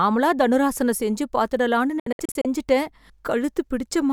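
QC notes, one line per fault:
2.00–2.45 s, digital broadcast dropout: after "தனுராசனம் செஞ்சு பாத்துடலாம்னு" the speech breaks into short muted holes, longest 64 ms, as the receiver mutes failed frames.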